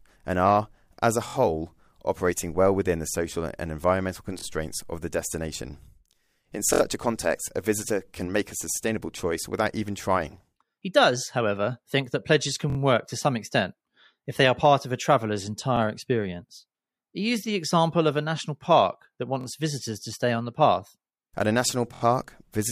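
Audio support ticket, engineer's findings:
Repeated buffer, eight stutters in the speech at 1.28, 4.39, 6.73, 8.75, 12.70, 15.77 (after "part of a traveller's"), 19.41 (before "visitors to stay on") and 21.94 s (after "a national"). Each lasts 23 to 70 ms as one 23.2 ms block replays one to three extra times. Fits a 1024-sample buffer underrun at the playback device. Last block resent, no audio skipped. Waveform shows identical copied segments with hard joins. Spectrogram shows vertical edges at each join.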